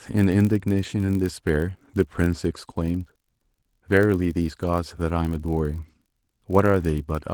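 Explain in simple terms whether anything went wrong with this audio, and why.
Something did go wrong: there's a steady low buzz under the speech from start to finish, at about 47 Hz. That's a block size mismatch (padded). One stage hands over chunks of audio that are a bit too short for the next stage, so each chunk gets topped up with silence. Those tiny gaps repeat at the block rate, which fits a 1024-sample block, and that creates the buzz. The slowdown is tiny, so the speech keeps its normal pace and pitch. The Opus voice compression sits on top of this, and its light effect on the sound is easy to hear past.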